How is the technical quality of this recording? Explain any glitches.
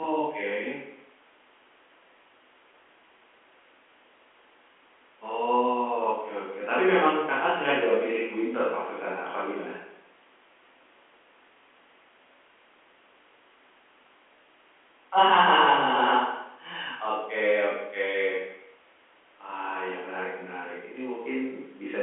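No glitches can be heard in the recording. The speech comes through G.711 telephone coding, so it has the narrow sound of a phone line, running roughly from 250 Hz to 3.4 kHz with nothing above about 3.7 kHz.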